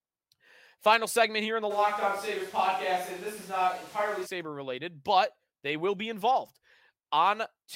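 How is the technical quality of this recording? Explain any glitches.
The recording has one clear glitch, a stretch where the speech loses its close, direct quality.

Switch to a distant microphone, from 1.72 to 4.25 s, just after "segment here in the" and ending before "related but they will". The close microphone's feed likely dropped out, leaving only a far pickup. The speech turns suddenly roomy and hollow with thinner bass and background noise about 25 dB below it, though the loudness barely changes, and it snaps back abruptly.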